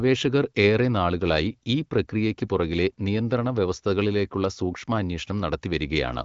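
Speech carried over an AMR wideband (HD Voice) link at a rate that fits 15.85 kbit/s, with content stopping short of about 7.6 kHz, and no faults to report.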